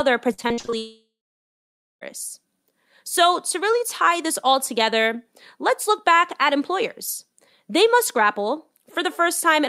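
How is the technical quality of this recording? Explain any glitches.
The recording has two clear network glitches near the start, both in the first two seconds of the speech.

From 0.33 to 0.74 s there is repeated packet loss with a robotic sound. Seven short gaps, the longest about 46 ms, each get filled by stretching the preceding sound, so roughly half of that stretch is synthetic. It comes across as choppy and robotic. On a spectrogram, harmonics smear into flat, repeated blocks that alternate with normal texture, and the waveform shows short, copied-looking segments.

Right after, from 0.78 to 2.03 s, comes a long network dropout. The sound first continues as a fading buzz, then about 0.9 s of near-silence follows before the speech returns with a piece of it missing. The likely cause is an extended break in arriving audio, with the receiver padding the gap and then giving up. The spectrogram shows a decaying smear, then an empty band, and the waveform flatlines until the speech resumes abruptly.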